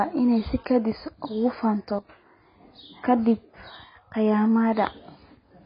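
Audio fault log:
throughout: AAC compression, heavily damaged audio with nothing above 5.1 kHz, which fits a low bitrate near 16 kbps; the spectrogram shows a hard, flat ceiling there.
1.99–2.09 s: sudden gain jump, sound and background drop together by about 12 dB, likely an unramped digital gain change; the waveform envelope steps down abruptly, then back up.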